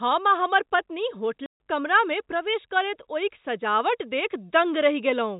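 At 1.46 s the speech drops out until 1.57 s. This is packet loss filled with silence. Lost packets became dead air. The gap fits about seven 20 ms packets. The G.711 telephone band stays narrow throughout.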